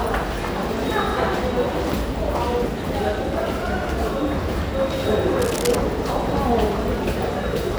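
From 5.39 to 5.76 s, cable scratch noise: dense, uneven rustling about 10 dB under the sound, likely a worn contact being moved, rougher and longer than a single click.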